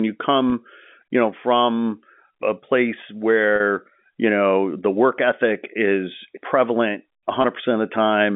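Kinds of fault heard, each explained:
Packet loss with pitch repetition: bits of the stream went missing, and the receiver bridged each gap by looping the last pitch cycle. You hear a brief held, buzzy blip: 20 ms at 0.50 s and 7.42 s, and 40 ms at 3.56 s, right after "know from a place".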